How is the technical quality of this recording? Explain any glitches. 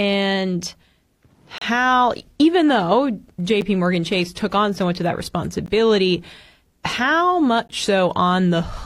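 The speech is interrupted by four short dropouts. They are gaps between stream segments. The first runs from 1.58 to 1.61 s and lasts about 32 ms. Shorter ones follow at 3.61, 5.66 and 7.68 s, lasting 8, 17 and 15 ms. They recur about every 2 s, which points to 2-second segments. The time stamps of neighbouring segments leave a small hole, and the player fills it with silence. Each gap is a hard-edged break. No audio is lost.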